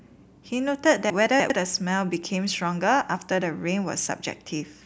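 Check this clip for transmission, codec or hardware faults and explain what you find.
Between 1.1 and 1.5 s the speech jumbles briefly: chunks out of order. One 100 ms chunk arrived late and plays three chunks after its proper place. Nothing is lost, but the sequence is scrambled, leaving three abrupt joins.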